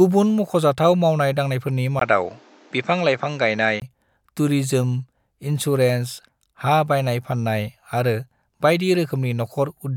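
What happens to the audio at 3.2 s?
At 3.2 s the speech sounds dull and boxy, with nothing above 8 kHz and a new, faint noise floor, after a brief 20 ms gap at 1.99 s. The likely cause is the input switched to a poorer device, a narrower-band device, until 3.82 s.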